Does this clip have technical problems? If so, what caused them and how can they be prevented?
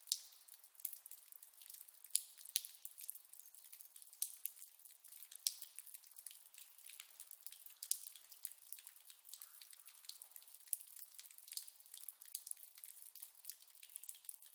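No, this clip has no technical problems, so there is nothing that needs preventing.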